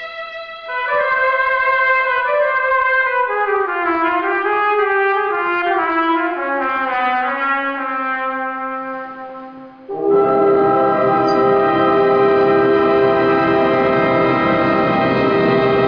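Listening through the recording, nothing stood out as a technical problem at any point.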